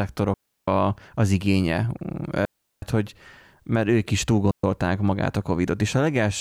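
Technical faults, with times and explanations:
0.34–0.68 s, 2.45–2.82 s and 4.51–4.64 s, digital wireless dropout: the speech drops into clean holes of near silence lasting about 340 ms, 370 ms and 125 ms, with no crackle, hiss or burst on either side, only a very quick fade in and out. The radio link between transmitter and receiver lost too much data to rebuild the audio, so the receiver muted its output until valid data returned.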